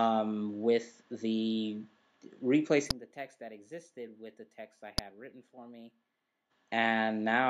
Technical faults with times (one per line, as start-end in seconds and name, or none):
2.86-6.46 imaging from linear upsampling